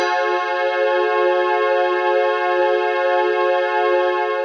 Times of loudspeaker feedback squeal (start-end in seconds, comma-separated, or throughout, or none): none